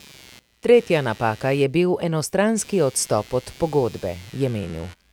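Computer activity noise runs throughout the speech: a buzz pulsing about 100 times a second, some 25 dB down, from computer load shifting the audio ground.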